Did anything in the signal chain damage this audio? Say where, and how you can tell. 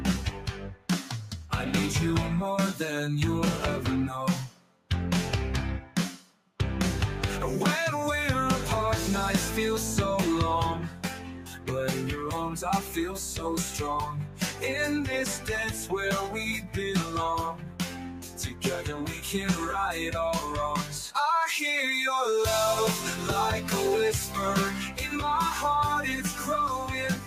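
Yes. A noise suppressor applied to music or sounds, active throughout the clip in the call-processing stage, is doing the damage. It treats steady, sustained content as if it were background noise and pulls it down while letting sharper onsets through. The result is a level that pumps and thins by around 10 dB from moment to moment. Held material and decays dip while transients stay upright, which gives the gain riding away.

The sound cut by the noise suppressor is clearest at 0.31–1.52 s, 4.47–4.9 s, 5.81–6.59 s, 10.89–19.25 s, 24.26–25.06 s and 26.28 s to the end. In each stretch, sustained or fading parts sink by up to about 9–10 dB and tails are clipped short. The long 10.89–19.25 s span loses roughly four seconds in total, in patches, as the suppressor's gain repeatedly clamps down on anything it judges stationary.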